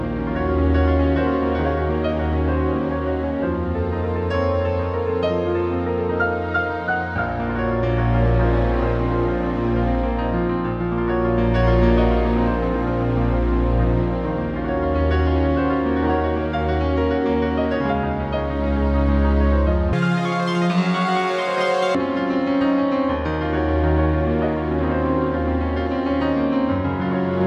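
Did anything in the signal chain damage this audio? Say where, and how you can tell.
Yes. From 19.93 to 21.95 s the sound runs at double speed and a full octave higher. This is audio read two samples at a time, a sample-format conversion fault in which the reader treats each pair of samples as one frame, as though mono were stereo or samples were twice as wide.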